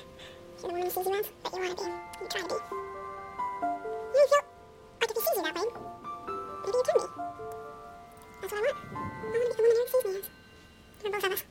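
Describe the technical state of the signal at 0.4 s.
At 0.4 s the audio read two samples at a time (double speed) fault is present, as it is throughout the clip. The reader is treating each pair of samples as a single frame, as though the data had two channels or samples twice as wide, so it gets through the material twice as fast. Everything plays at 2x speed and 12 semitones higher, a full octave.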